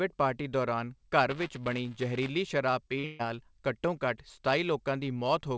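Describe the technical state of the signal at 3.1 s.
A brief smear from 2.99 to 3.05 s is short concealed packet loss: about 40 ms never arrived, and the receiver extended the preceding sound to cover it. It runs straight into a held, fading fill from 3.05 to 3.21 s, a burst of packet loss in which about 140 ms went missing and was bridged by a decaying continuation of the last sound. The audio resumes at "ਘੱਟੋ ਘੱਟ".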